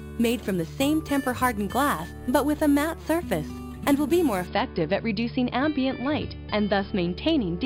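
From 0.0 to 4.47 s, imaging from sample-and-hold upsampling gives a metallic fizz tracking the sound, mirrored from about 5.5 to 11 kHz at about 19 dB below it, unlike aliasing's fold-down.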